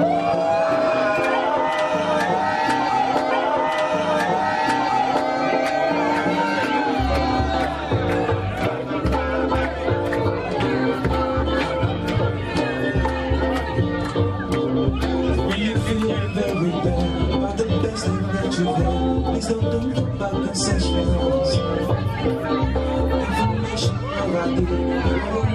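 A stream segment repeated at 3.30 s: from there to 5.30 s, about 2.0 s of the audio plays a second time, so the programme steps back and runs the same stretch again before continuing. The player fetched or queued one segment twice, delivering its contents back-to-back instead of moving on to the next. At the point where playback jumps back there is a small blip, and the clip runs about 2 s longer than the material it carries.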